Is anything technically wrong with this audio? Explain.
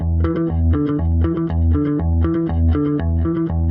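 No, nothing in this audio points to a technical fault.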